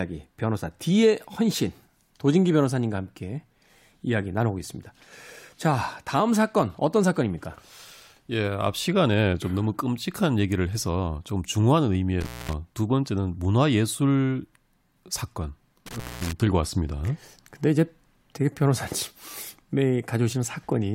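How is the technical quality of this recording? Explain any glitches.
The recording has two brief dropouts from an intermittent contact. From 12.21 to 12.53 s and again from 15.86 to 16.33 s, the speech cuts out with a crackle at each edge, leaving faint hiss for about 0.23 s and 0.21 s. A loose cable or plug briefly lost connection and then reseated.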